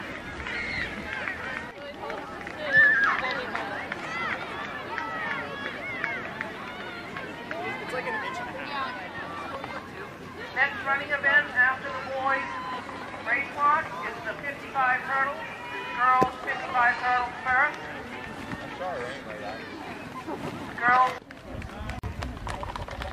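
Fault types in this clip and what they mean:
Gap at a join of encoded pieces: a brief silence of about 46 ms cuts into continuous sound from 21.99 to 22.04 s, with smeared edges, then resumes where it left off. Separately encoded segments were joined untrimmed, leaving the encoder's start delay and final-frame padding in.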